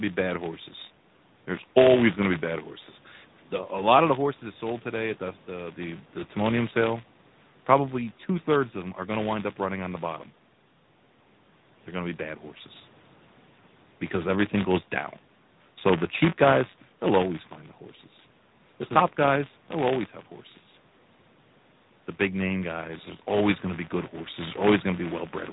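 Speech throughout the clip carries buffer tearing: a steady robotic rattle at 188 Hz, which fits a 256-sample buffer. The writing and reading sides of the ring buffer overlap inside each period, so a small slice of every buffer replays audio from roughly 20 ms earlier. On a waveform this shows as hard discontinuities at regular intervals. On a spectrogram it appears as vertical striations that are present only while sound is playing. The audio has also passed through the AMR narrowband mobile codec. Its buzzy, synthetic timbre points to a mid-rate AMR-NB mode of about 10.2 kbps. A spectrogram would show a flat ceiling with nothing above 3.8 kHz, and smeared, grainy harmonics below it. The call microphone processing path, with its bass roll-off, is not part of the fault.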